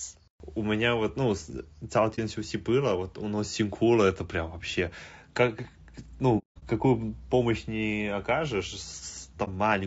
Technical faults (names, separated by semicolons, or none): low-delay AAC compression; AAC frame loss with muting